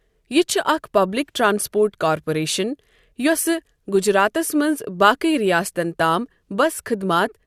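Listening through the speech recording, nothing stood out as a technical fault at any point.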